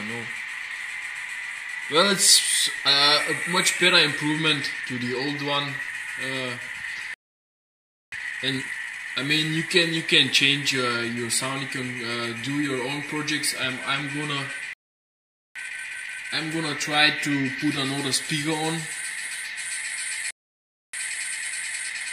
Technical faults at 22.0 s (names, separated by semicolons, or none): time-compressed catch-up